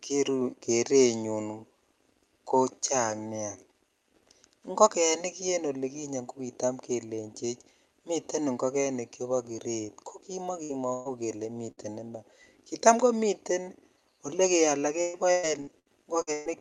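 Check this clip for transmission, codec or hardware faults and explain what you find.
Yes, there are transmission faults: three short dropouts and, near the end, a stretch of repeated loss, heard over an Opus call path whose band stops around 12 kHz, which fits a bitrate of about 64 kbps.

Burst of packet loss at 10.63–10.72 s (right after "ingogenik chebo kiret ko"), 10.93–11.08 s and 11.71–11.80 s (just before "iman kita komiten"). About 60, 120 and 60 ms went missing. The receiver stretched the last sound to cover each hole and let it fade, so a brief held buzz or hiss replaces the lost part before the speech picks up further along. Each is a single isolated hole, not a run of them.

Repeated packet loss (robotic sound) from 15.01 to 16.49 s. Six gaps arrive in quick succession, the longest about 125 ms, together about 0.54 s, roughly a third of the stretch. Every gap is patched with continued sound, and the next one lands before the speech recovers. 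That gives choppy speech with pieces gone. The holes cluster tightly here, unlike the three separate bursts earlier.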